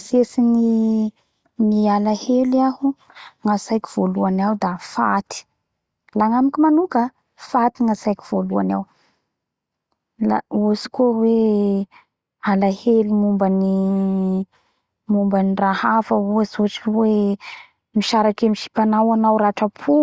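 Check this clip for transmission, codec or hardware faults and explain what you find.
No fault of any kind is audible anywhere in this speech recording.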